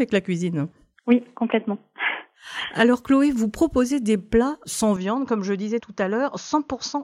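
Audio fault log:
4.96 to 7.03 s, input switched to a poorer device: the recording path likely jumped mid-take to a lesser microphone or a headset's call profile, with no gap at the changeover. From that moment nothing reaches above 6.8 kHz, so the top end vanishes and the sound turns dull and boxy. Level drops by about 5 dB, and a faint new background noise sits roughly 55 dB beneath the signal until the end.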